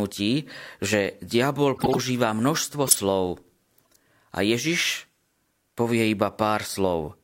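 Corrupt frame decoded in this speech clip at 0.49–0.55, 1.76–1.98, 2.87–3.00 and 3.85–3.96 s: the decoder played damaged compressed frames anyway, putting energy at wrong frequencies as brief bursts, loudest around 2.9 s.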